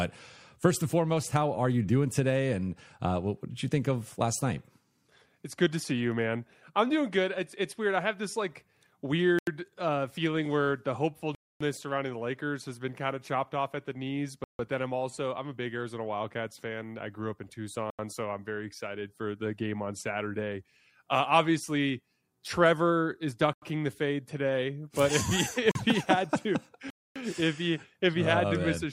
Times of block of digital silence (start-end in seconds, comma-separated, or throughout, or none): 9.39-9.47, 11.35-11.61, 14.44-14.59, 17.90-17.99, 23.53-23.62, 25.71-25.75, 26.90-27.16